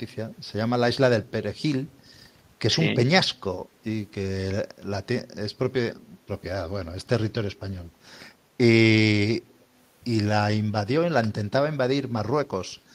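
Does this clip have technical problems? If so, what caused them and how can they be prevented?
Yes. Speech suppressed in double talk appears at 6.81 to 6.88 s: the voice dips by roughly 15 dB for about 70 ms, a short hole in the talker's level. The likely cause is an echo canceller that could not tell the local talker apart from loudspeaker sound while both sides spoke, so it pulled everything down. Prevent it with a canceller tuned for better double-talk detection, or a headset that keeps loudspeaker sound out of the microphone.

Echo leak occurs at 9.5 to 9.62 s, where a faint delayed copy of the speech returns about 265 ms late, very low at roughly 40 dB under the voice. This is likely residual loudspeaker sound the far end's echo canceller failed to remove, which was then sent back down the line. Prevent it by using headphones on the loudspeaker side or giving its canceller stronger residual-echo suppression.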